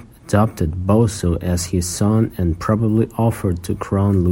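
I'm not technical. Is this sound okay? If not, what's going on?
Yes, nothing stood out as a problem when listening to this recording of someone speaking.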